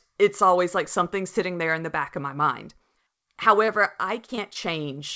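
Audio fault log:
3.66–3.70 s, 4.26–4.30 s, 4.36–4.39 s and 4.53–4.57 s, short concealed packet loss: brief smears or wobbles in the speech, clustered in the last second and a half, where a short sound can seem to slip away. Each time about 20 ms of the call arrived too late to decode, and the receiver bridged the gap by extending the preceding sound before blending back into real audio. The wideband call path, with nothing above 8 kHz, carries these patches along.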